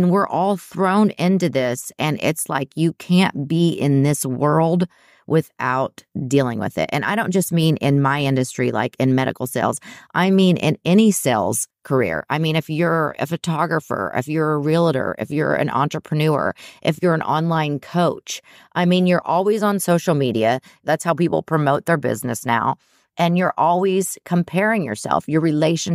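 No technical faults can be heard anywhere in the recording. There is nothing in the audio that calls for a timestamp or an explanation.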